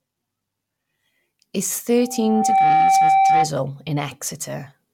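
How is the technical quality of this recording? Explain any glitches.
The recording has one clear defect: a loudspeaker feedback squeal from 1.97 s to 3.51 s. A single tone at 776 Hz rises out of the speech, swelling over roughly three-quarters of a second until it sits about 10 dB above the speech. The microphone was picking up the loudspeaker it fed, and at 776 Hz the loop gain exceeded one, so that frequency reinforced itself on each pass. Unlike a steady hum or an interfering tone, it builds rather than starting at full level.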